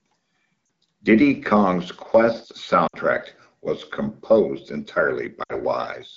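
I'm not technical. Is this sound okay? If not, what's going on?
No. There are three short glitches from lost AMR speech frames, at 0.65 to 0.69 s, 2.87 to 2.96 s and 5.44 to 5.54 s. In each one, the phone guesses the missing bits by stretching the last sound, which quickly fades to near silence before the voice comes back.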